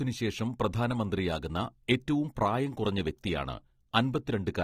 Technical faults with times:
0.00-4.63 AAC compression

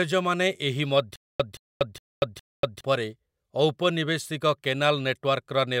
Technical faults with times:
1.16-2.81 stutter with silent gaps

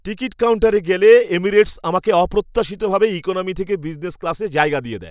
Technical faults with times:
none

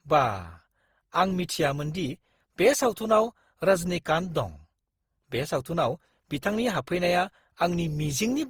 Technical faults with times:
0.00-8.49 generation loss

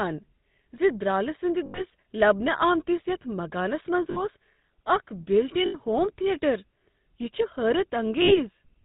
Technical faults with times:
0.00-8.84 GSM full-rate codec
1.66-1.82 lost GSM frames
4.10-4.25 lost GSM frames
5.66-5.75 lost GSM frames
8.22-8.39 lost GSM frames

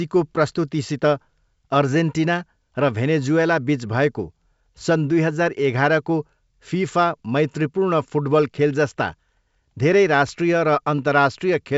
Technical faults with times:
none

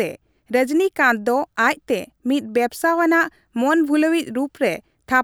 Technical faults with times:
none

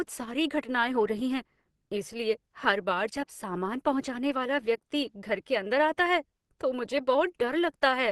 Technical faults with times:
0.00-8.12 Opus compression

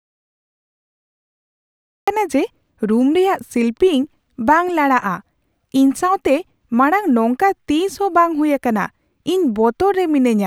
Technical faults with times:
0.00-2.08 audio dropout to silence

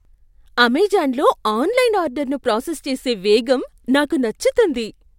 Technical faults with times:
none

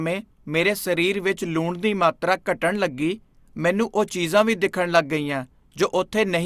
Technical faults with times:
none

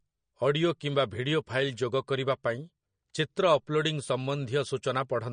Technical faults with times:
0.00-5.33 MP3 compression

